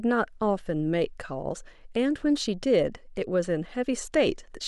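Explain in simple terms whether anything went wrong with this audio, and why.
Listening through the recording, nothing stood out as having gone wrong, so there is no problem to explain here.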